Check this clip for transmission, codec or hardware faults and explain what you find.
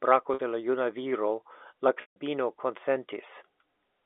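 There are two dropouts here, both packet loss with pitch repetition. At 0.34 s, lasting 50 ms right before "de la", the receiver filled the gap by looping the last pitch period, so you get a brief held, slightly buzzy tone. The second, at 2.01 to 2.16 s just after "viro la", runs 150 ms. The repeated period fades out over roughly the first 50 ms, leaves a short silence, then the speech cross-fades back in. The G.711 A-law phone band is audible throughout.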